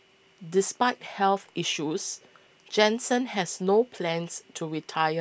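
No technical faults can be heard anywhere in the speech.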